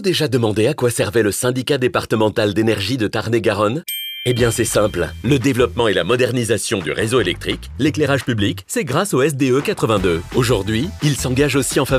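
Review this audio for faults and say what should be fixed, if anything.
Nothing here needs fixing, as no faults can be heard anywhere in the recording. No repair or processing is called for.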